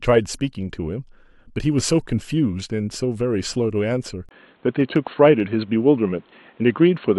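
At 4.29 s there is a brief gap of about 20 ms. From then to the end, the speech turns dull and boxy. Nothing reaches above 4.2 kHz, so the upper band is gone. The level shifts by roughly 5 dB. A new, faint background noise appears, well below the speech. This abrupt change in tone, bandwidth and noise is most likely an input switched to a poorer device, such as another microphone or a headset's call profile.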